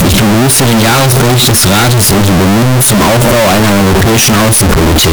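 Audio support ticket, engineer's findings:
Float read as integer, entire clip. Speech near-square at a near-fixed high level, very loud and harsh, background noise as loud as the talker, pitch still followable. Likely cause: 32-bit float samples decoded as 32-bit integer, sign and exponent bits setting amplitude. Unlike gain clipping: the level is fixed regardless of the source and quiet passages are equally loud.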